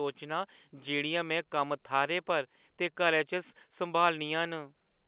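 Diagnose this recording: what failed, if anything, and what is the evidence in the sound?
Nothing failed here: the speech comes over an ordinary A-law G.711 telephone path at 8 kHz, so the top end stops at 4 kHz and a faint level-following hiss rides under it, which is just how that line is meant to sound.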